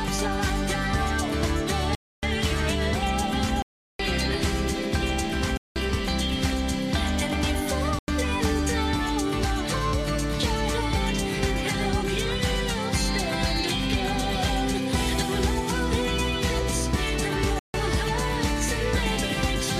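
Blocks of digital silence hit at 1.95, 3.62, 5.57, 7.99 and 17.59 s, each 0.09 to 0.37 s long. Likely unfilled output buffers left abrupt holes: a flat waveform and blank spectrogram columns.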